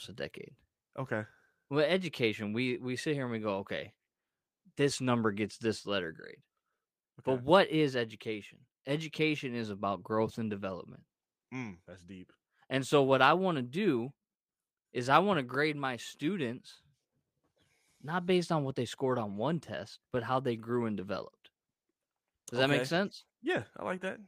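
Nothing in this speech recording comes across as a technical fault; there's just nothing here to flag.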